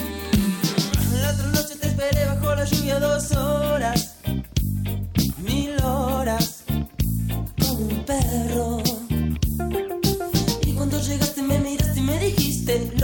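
No technical faults can be heard anywhere.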